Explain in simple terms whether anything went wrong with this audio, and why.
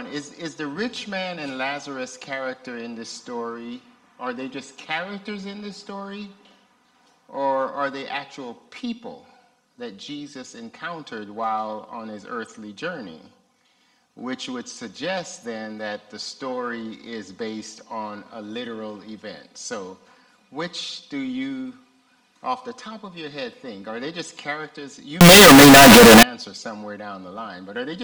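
From 25.21 to 26.23 s the sound suddenly turns into a very loud, harsh, buzzy blast, with any background noise just as loud as everything else, though the rise and fall in pitch can still be followed. This is most likely a float read as integer fault: samples stored as decimal numbers were read back as whole numbers, which fits 32-bit float data taken as 32-bit integers. That squashes the waveform into a near-square shape at an almost fixed, high level.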